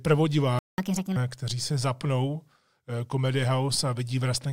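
At 0.59 s the speech cuts out for about 0.19 s, until 0.78 s. That's a playback stall, most likely the player running dry or its thread getting blocked. Right after, from 0.78 to 1.16 s, you get catch-up at higher speed: the backlog plays at 1.5 times normal, pitch jumping up around seven semitones, just ahead of "kteří se zapnou".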